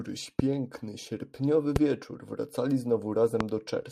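Sharp loud pops cut through the speech at 0.39–0.42 s, 1.76–1.78 s and 3.41–3.43 s, each a single hard click about 15 to 20 dB above the speech, which carries on underneath. Each is likely a brief voltage spike from static, a switch or a driver glitch.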